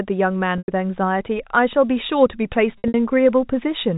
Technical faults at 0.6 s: packet loss with pitch repetition

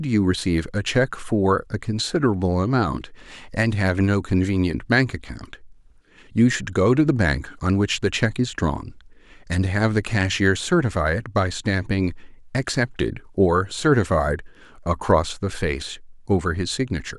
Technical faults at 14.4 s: none

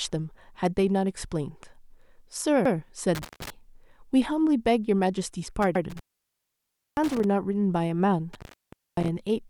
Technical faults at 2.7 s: overlapping chunks

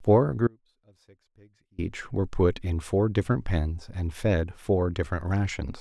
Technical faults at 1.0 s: audio dropout to a faint residue

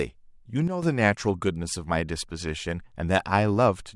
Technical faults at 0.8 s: sudden gain jump

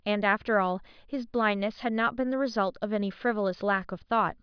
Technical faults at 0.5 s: none

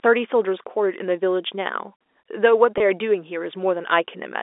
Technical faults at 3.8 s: none

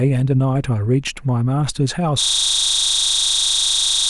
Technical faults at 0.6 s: none

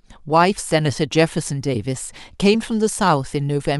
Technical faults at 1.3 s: none

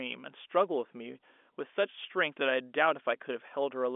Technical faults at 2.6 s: none

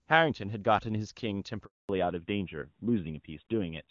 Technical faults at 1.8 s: handover gap; fallback to narrowband

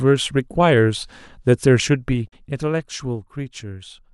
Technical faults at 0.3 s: none

